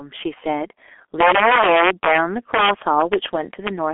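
Speech, with two faults running throughout. Integer overflow: loud peaks driven about 7 dB past full scale wrap to the opposite sign instead of clipping, giving harsh cracks on a small fraction of samples. G.723.1 codec: heavy low-rate coding damage, which fits about 6.3 kbit/s, leaves a 300 Hz to 3.4 kHz telephone band with nothing above 3.6 kHz, so consonants blur and the sound is muffled and hoarse.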